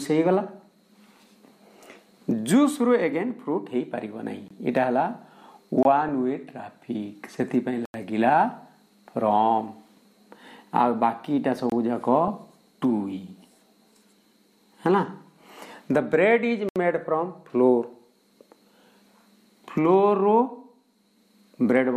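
Abrupt holes cut the sound at 4.48–4.51, 5.83–5.85, 7.85–7.94, 11.70–11.72 and 16.69–16.76 s. These are blocks of digital silence, where the output buffer went unfilled and was zeroed; the 23 ms gaps fit a 1024-sample buffer. At 12.28 s a brief patch of DAB burbling: weak reception let a small fraction of bit errors through, corrupting the audio data in a couple of frames.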